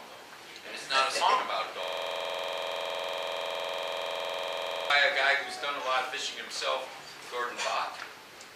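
At 1.84 s the audio locks up into a system hang loop that lasts until 4.90 s. The machine or its driver stalled, but the sound hardware kept replaying the same stretch of its ring buffer, so one 46 ms slice repeats dozens of times. That length fits a 2048-sample buffer. Repeating at about 21.5 Hz, it sits right between a buzz and a stutter, giving a coarse, rattling drone until playback recovers.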